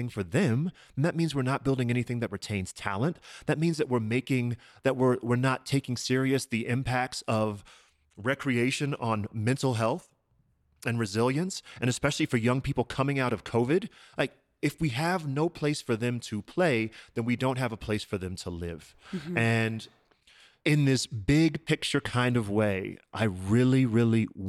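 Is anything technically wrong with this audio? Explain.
No, the speech recording shows no technical faults anywhere in the signal.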